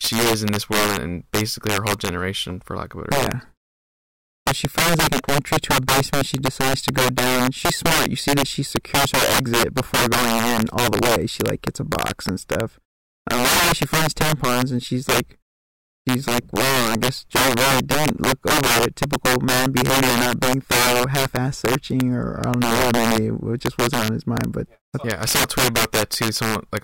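Integer overflow runs throughout this speech: pushed about 14 dB too hot, a small share of samples exceed the integer limit and wrap to the opposite sign instead of being capped, so loud syllables burst into violent cracks, far harsher than clipping's flattened, buzzy peaks.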